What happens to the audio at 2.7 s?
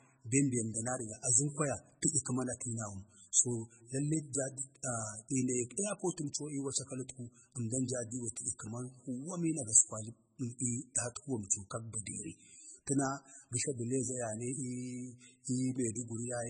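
At 2.7 s, as throughout, the speech has a hard ceiling at 9.4 kHz and a watery, swirling texture, likely from heavy MP3 compression at a bitrate near 16 kbps. Unlike a plain low-pass filter, the weak frequency lines flicker on and off between frames.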